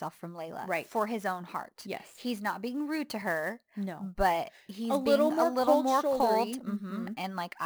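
Sample clock jitter runs through the whole speech clip. The converter's timing wanders by around 10 microseconds, so each sample is captured a little off its proper instant, and the error is largest where the waveform changes fastest. The result is a grainy hiss riding roughly 25 dB below the signal, swelling on loud and bright sounds and disappearing in pauses. A spectrogram shows a broadband haze that tracks the speech energy and clears in the gaps.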